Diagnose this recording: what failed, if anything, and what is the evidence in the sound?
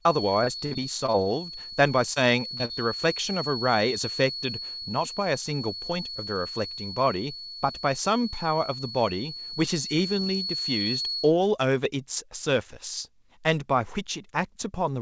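A steady whistle near 4.4 kHz runs from the start to 11.3 s, sitting well below the speech and swelling and fading slowly in level. This is a feedback whistle, likely from an acoustic loop between loudspeaker and microphone held just at the edge of instability, so one frequency rings on without running away.

From 0.44 to 1.28 s the network repeatedly dropped or delayed audio. This repeated packet loss (robotic sound) leaves eight gaps, the longest 55 ms. The receiver patched about a quarter of that span by extending the last sound, giving choppy speech with missing fragments.

Short concealed packet loss occurs at 2.14 to 2.18 s, 2.58 to 2.72 s and 2.65 to 2.71 s, with 20, 20 and 40 ms missing. The decoder bridged each hole by continuing the preceding sound and then blending back, producing brief smears or wobbles within the G.722 call band, which stops at 8 kHz.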